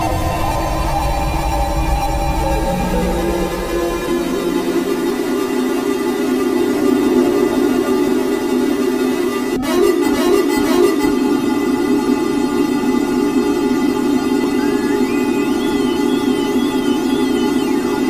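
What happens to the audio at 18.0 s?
Nothing goes wrong at 18.0 s; the audio is intact there.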